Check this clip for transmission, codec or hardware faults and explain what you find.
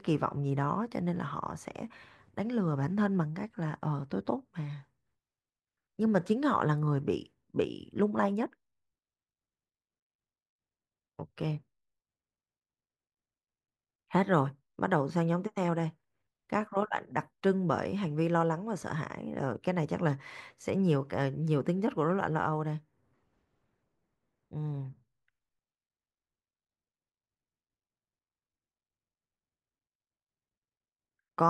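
Nothing stood out on listening to this speech recording.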